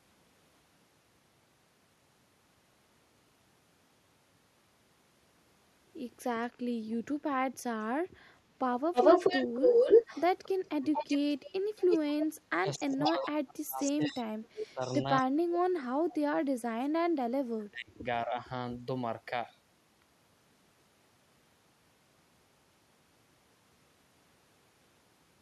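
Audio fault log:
8.93–12.27 s, 13.04–13.27 s, 13.82–15.01 s: echo leak. A second copy of the speech trails the original by 233 ms, first about 5 dB louder than the direct speech, then level with it, then well below it. This is likely a far-end loudspeaker echo that the echo canceller left in.
12.29–14.26 s, 14.60–14.82 s, 15.20–16.16 s, 16.55–18.36 s: speech suppressed in double talk. The speech drops by up to about 35 dB in pieces. This is likely an echo canceller that cannot separate the talker from the echo and attenuates both.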